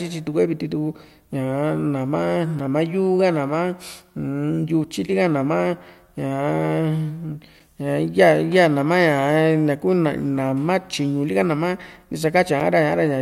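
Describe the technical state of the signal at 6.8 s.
At 6.8 s the speech signal is intact, with no technical fault audible at that moment.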